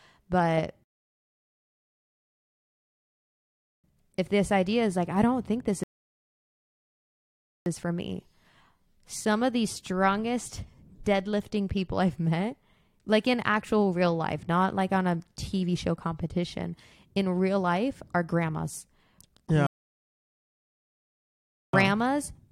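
The speech drops to silence and resumes exactly where it stopped at 0.84–3.84 s, 5.84–7.66 s and 19.67–21.73 s. These are rebuffering stalls: the player ran out of downloaded audio and waited, adding about 3.0, 1.8 and 2.1 s.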